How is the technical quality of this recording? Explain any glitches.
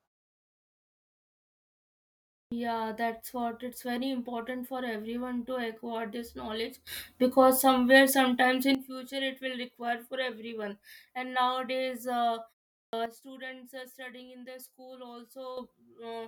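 The recording has two kinds of glitch: speech onsets cut off after pauses, and abrupt level steps.

Clipped start after a pause: at 2.4 s (after a 2.4 s silence) and 12.81 s (after 0.36 s), roughly 0.12 s of the first sound is missing. The output path needs time to wake, so speech bursts out mid-syllable. The waveform jumps from flat to full amplitude with no rising edge.

Sudden gain jump: from 6.87 to 8.75 s the level rises by about 12 dB, and from 13.06 to 15.57 s it drops by about 10 dB. The likely cause is a digital gain change applied without a ramp. Voice and background noise shift together, showing as a rectangular step in the waveform envelope and a uniform brightening or darkening across the spectrogram.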